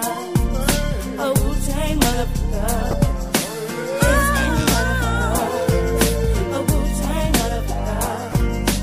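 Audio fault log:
2.91–2.94 s and 8.32–8.34 s, corrupt frame decoded: a loud blip, then a quieter one. Each is a squeak of misplaced frequencies lasting about two frames, then one, from damaged data played anyway.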